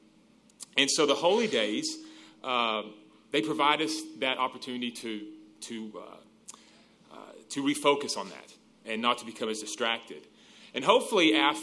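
Nothing technically wrong turns up anywhere in this audio, so there's no fault to point at or explain here.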